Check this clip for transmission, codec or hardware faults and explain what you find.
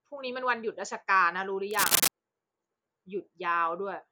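One hardware fault is present in this speech clip: cable scratch noise. It runs from 1.71 to 2.08 s, lasting a little over a third of a second. A dense, ragged burst of scratching and rustling sits on top of the speech there. It sits roughly 5 dB above the speech itself. The likely cause is a worn cable, connector or control being moved. Its contact resistance then jumps about rapidly, injecting uneven noise into the signal.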